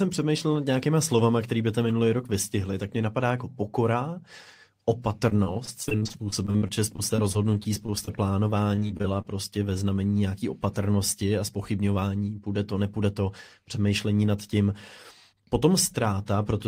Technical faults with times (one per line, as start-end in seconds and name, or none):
5.29-8.09 repeated packet loss (robotic sound)
8.75-9.26 repeated packet loss (robotic sound)
15.33-16.20 jitter buffer speed-up